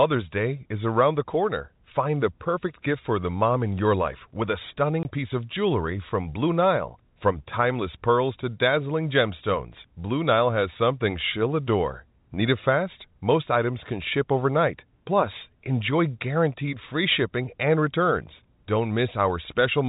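At 5.03 to 5.05 s, packet loss filled with silence cuts a 20 ms hole with hard edges, consistent with two 10 ms packets. Unlike concealment, nothing is repeated or smeared across the narrowband G.711 telephone sound.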